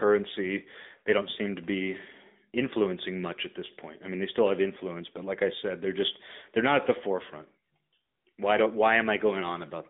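From start to finish you can hear the AMR narrowband mobile codec: nothing above about 3.7 kHz, a 200 Hz to 3.6 kHz phone band, and buzzy, synthetic speech that fits a mid-rate mode around 10.2 kbps.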